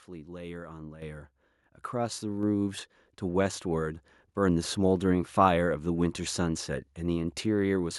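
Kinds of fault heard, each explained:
Microphone volume stepped up: input gain raised about 8 dB in one step at 1.02 s; the waveform envelope and the spectrogram's whole frequency range, background included, brighten abruptly together.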